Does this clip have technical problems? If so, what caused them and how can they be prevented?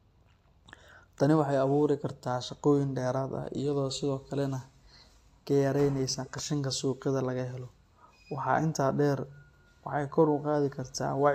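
No, the speech signal in this clip is technically sound, with no faults to trace to a cause or to prevent.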